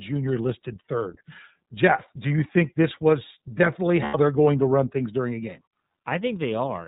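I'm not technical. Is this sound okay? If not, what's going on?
No. The whole clip is muffled and slightly robotic, because it passed through the iLBC codec, a phone-grade voice codec that cuts off everything above 4 kHz. Between 4.05 and 4.15 s there's a brief buzzy, held sound where iLBC frames were lost, about 90 ms of missing speech that the decoder covered by repeating its last sound. The voice recovers right after.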